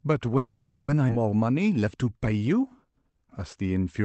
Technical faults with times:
0.37-0.90 call audio freeze
1.08-1.11 skip ahead
1.44-4.02 jitter buffer slow-down

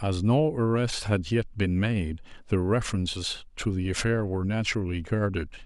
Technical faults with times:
none

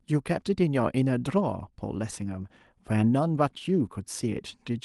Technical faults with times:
none

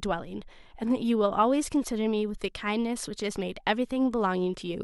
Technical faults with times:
none

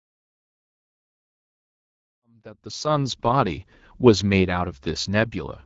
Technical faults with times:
none

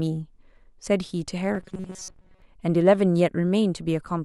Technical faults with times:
1.55-2.42 robotic sound from repeated short buffers

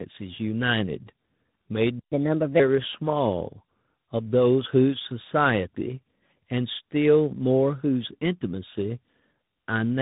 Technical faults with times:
0.00-10.02 tandem speech coding
1.99-2.12 playback stall
2.12-2.60 catch-up at higher speed

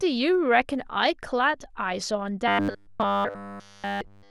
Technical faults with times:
2.48-4.30 robotic sound from repeated short buffers

